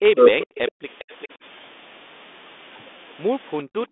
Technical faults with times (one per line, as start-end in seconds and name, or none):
0.14-0.36 speech suppressed in double talk
0.39-0.72 echo leak
0.72-0.84 background gated by the echo canceller
0.99-1.28 echo leak
3.64-3.91 background gated by the echo canceller